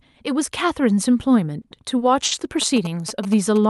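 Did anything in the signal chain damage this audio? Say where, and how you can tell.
Yes. At the network and jitter-buffer stage there are three short stalls from late packets: at 1.61 to 1.66 s and 1.98 to 2.03 s the sound is held for about 30 ms, and at 2.25 to 2.33 s for about 60 ms. The buffer ran dry, the receiver stretched the last sound, and playback resumed where it left off. Nothing is skipped. That distinguishes it from packet loss, where concealment would paper over a real gap and the sound would jump ahead.

From 2.62 s to the end, the analogue wiring picks up GSM signalling bursts. A nearby 2G phone's radio bursts are rectified in the audio circuit and show up as a galloping dit-dit-dit of short buzzes at about 217 Hz, roughly 10 dB below the sound itself. Mains hum would be a steady 50 or 60 Hz drone. This arrives in irregular clusters with a buzzy 217 Hz repetition, which is the signature of phone interference rather than power-line pickup.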